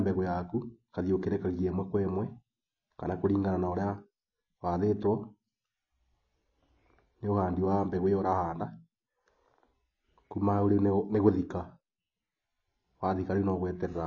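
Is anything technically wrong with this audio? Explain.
Yes, the whole clip has a compression problem. Throughout the speech, there's simply nothing above 9.1 kHz, so it sounds dull, and the top end smears with a warbly, fizzy edge on sibilants and held sounds. That's likely AAC compression, AAC-LC pushed to a bitrate low enough that the encoder cuts the bandwidth and leaves gaps in what it keeps. The damage is plainly audible, which fits something around 24 kbps.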